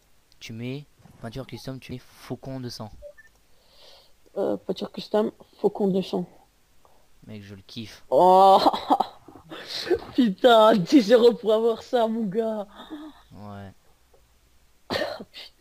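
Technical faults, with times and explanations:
1.91 s, damaged data in a compressed stream: corrupt bytes desync the decoder, causing a brief glitch; a short broadband smear and waveform discontinuity.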